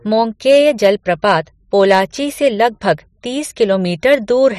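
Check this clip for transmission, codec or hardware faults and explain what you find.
Hard clipping appears three times in the speech, at 0.49 to 0.90 s, 1.80 to 2.00 s and 4.10 to 4.48 s. A stage in the chain was overdriven by about 3, 4 and 2 dB respectively, so peaks were sliced flat, adding high harmonics heard as crackly, gritty distortion on the loudest syllables.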